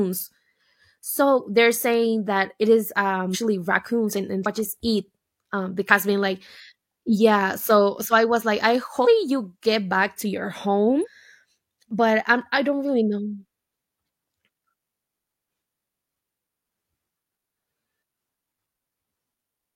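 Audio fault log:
3.30–3.36 s, compressed frames skipped: between "saying that it is" and "raccoons and" the speech jumps forward by roughly 0.4 s, about seven whole frames, which fits a 46.4 ms frame length. A spectrogram shows harmonics abruptly changing pitch and position. The waveform shows an envelope discontinuity.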